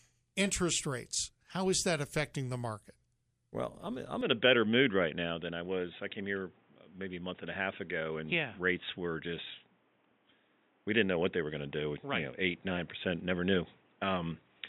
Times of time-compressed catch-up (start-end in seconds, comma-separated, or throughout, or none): none